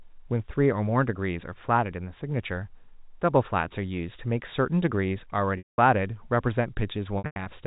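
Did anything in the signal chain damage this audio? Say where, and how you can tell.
Yes. Packet loss with pitch repetition on the network: the receiver repeats the last pitch period and fades to silence across a 200 ms gap at 5.58–5.78 s, and across scattered losses at 7.18–7.46 s.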